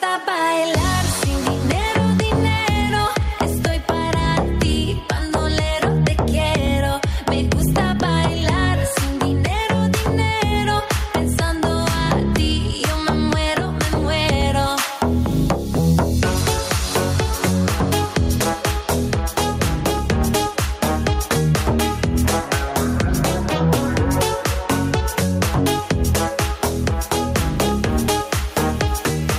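Gain pumping runs through the whole clip. The swing is around 10 dB. Loud and quiet passages sit close together in level, and the sound feels squashed. The likely cause is input gain set far too high, with a fast limiter or compressor pulling the level down on each peak.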